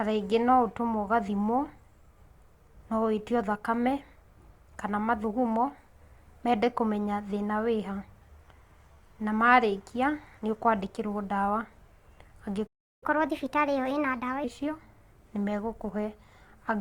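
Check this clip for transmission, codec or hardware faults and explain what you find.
Two playback faults occur back to back near the end of the speech.

A playback stall runs from 12.66 to 13.03 s. The speech cuts out mid-flow for about 0.35 s, most likely because the player's buffer ran dry or its output thread was blocked, so nothing reached the output until it recovered.

Catch-up at higher speed follows from 13.03 to 14.44 s. The player resamples its backlog at 1.25 times normal speed to recover the lost time, so the speech sounds hurried and raised by roughly four semitones.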